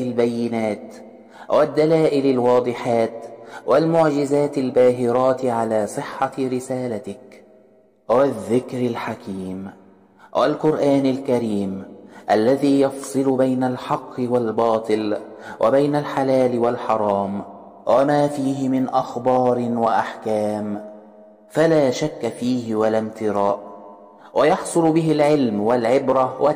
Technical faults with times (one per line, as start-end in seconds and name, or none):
0.00-26.55 hard clipping